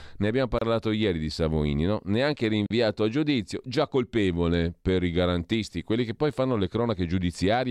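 At 0.59 to 0.61 s the speech drops into silence for about 29 ms. At 2.66 to 2.70 s it stops again for about 40 ms. Both are gaps at a join of encoded pieces. Separately encoded segments were butted together untrimmed, leaving encoder delay and end padding. Edges are smeared, and the speech resumes where it stopped.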